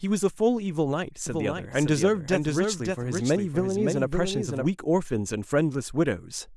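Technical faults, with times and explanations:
1.27 to 4.65 s, doubled audio track: the speech is heard twice, with a second copy trailing the first by about half a second. The copy sits roughly 5 dB below the original. It carries the full frequency range and has no decay or room colour, so it is no natural echo. It cuts in and out abruptly at both ends. The likely cause is the signal being captured again through a slower path, or an edit leaving two copies out of step.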